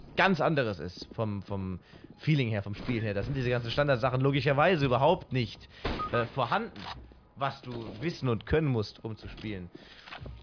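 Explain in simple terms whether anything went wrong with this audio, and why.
Nothing went wrong; no faults can be heard.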